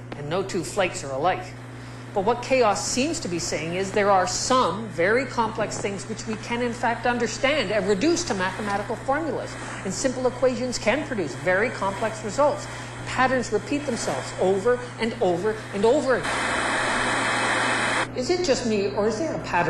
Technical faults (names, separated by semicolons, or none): none